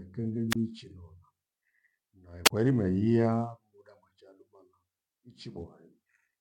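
Speech recorded through a wireless microphone suffers two wireless microphone squelch dropouts. The first runs from 0.50 to 0.56 s. The second runs from 2.45 to 2.50 s. Each one starts with a short burst of hiss. Then the audio cuts to near silence, about 25 ms the first time and 31 ms the second. The radio signal faded briefly. The receiver's squelch then muted its output until the signal recovered.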